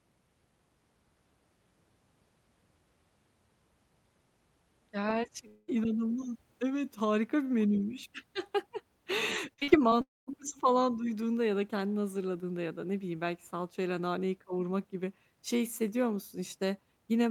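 From 5.47 to 5.70 s the speech stops and is replaced by about 0.2 s of continued sound from just before: the likely cause is a long network dropout. It is one unbroken hole rather than a string of short ones. When the speech resumes, the missing 0.2 s is simply gone.

Between 9.54 and 9.93 s there is repeated packet loss, which gives a robotic sound. Five separate gaps, none longer than 42 ms, are each patched with continued sound. Together they cover about 35% of that stretch. The quick alternation of real and patched fragments makes it choppy. That distinguishes it from a single dropout.

From 10.01 to 10.29 s comes a second likely long network dropout, just before "falan duyduğunda ya da". About 0.26 s is lost. The fill fades away, leaving roughly 0.2 s of silence, a sign of a gap long enough for concealment to give up.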